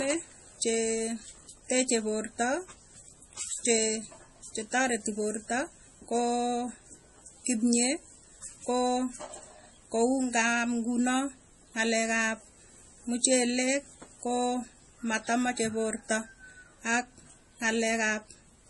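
From start to finish the speech carries heavy MP3 compression damage, likely from an encoder starved of bits, which fits a rate around 32 kbps. Nothing survives above 11.3 kHz, so the top end sounds shaved off, and quieter frequency detail keeps dropping in and out between frames. That gives the voice a watery, swirling texture, with metallic chirps on s sounds and consonant attacks that smear rather than land crisply.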